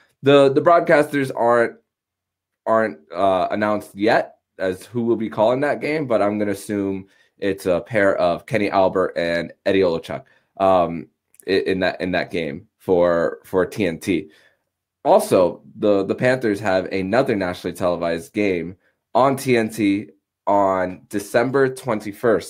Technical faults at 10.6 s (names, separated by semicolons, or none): none